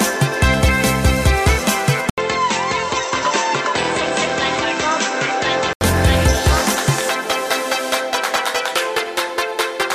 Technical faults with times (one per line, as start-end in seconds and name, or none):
2.10-5.81 input switched to a poorer device